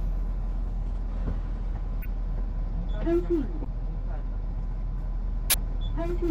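At 2.02 to 2.08 s, a corrupt frame was decoded. Flipped bits in the compressed data went unnoticed, and the decoder played the damaged frames anyway. Roughly four frames in a row are hit. Misread gains and codes put energy in the wrong frequency bands. The result is a short chirpy burst of noise, peaking at about -20 dBFS.

At 3.64 s, there is a CD skip. The laser lost its track and landed on another turn of the spiral. Playback mutes for around 15 ms, which is heard as a small tick. The sound then picks up from a different point on the disc, so the flow jumps abruptly.

At 5.50 to 5.54 s, another corrupt frame is decoded. This time a single frame is damaged. It is louder, reaching about -10 dBFS, and comes across as a sharp blip.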